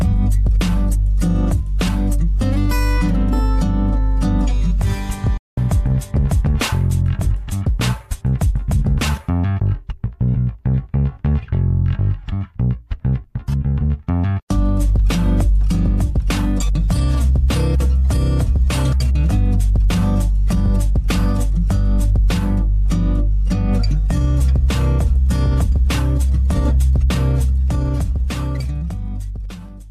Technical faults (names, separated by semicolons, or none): digital broadcast dropout